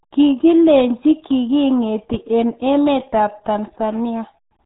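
Muffled, gargly speech runs throughout with nothing above 3.8 kHz. This is heavy RealAudio 14.4 codec damage, which fits an 8 kbit/s dial-up stream.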